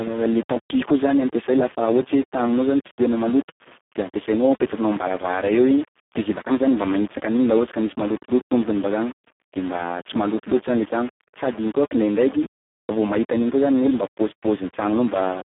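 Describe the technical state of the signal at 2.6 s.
At 2.6 s, as throughout the clip, grainy distortion that tracks the speech sits about 20 dB below it, likely from rounding to roughly 5 bits without dither. Speex codec damage is also present across the whole clip. Heavy CELP coding leaves the speech noisy and hoarse, which fits a bitrate near 4 kbps. The band is confined to 200 Hz to 3.4 kHz, with nothing above 3.8 kHz.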